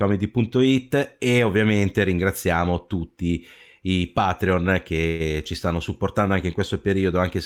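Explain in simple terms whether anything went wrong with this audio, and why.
A call audio freeze at 5.07 to 5.22 s, just before "ci stanno supportando anche": sound stretches into a brief buzz, likely held-up packets, then resumes with nothing lost.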